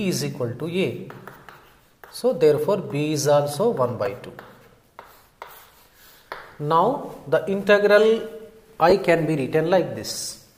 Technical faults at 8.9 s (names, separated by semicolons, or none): lost LE Audio frames